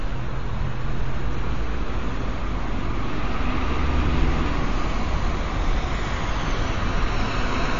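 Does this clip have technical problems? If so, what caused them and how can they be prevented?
Yes. Throughout, the audio has no content above 7.2 kHz and a watery, swirling texture, likely from MP3 compression at a low bitrate, around 32 kbps. Prevent it by encoding at a higher bitrate or using lossless storage.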